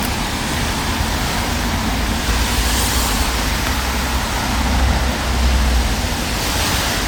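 Generation loss runs through the whole recording. The sound is swirly, smeared and hollow, and attacks blur. The band stops near 19.9 kHz, which fits a 128 kbit/s MP3. The likely cause is about ten rounds of decoding and re-encoding, each adding fresh quantisation noise and spectral holes.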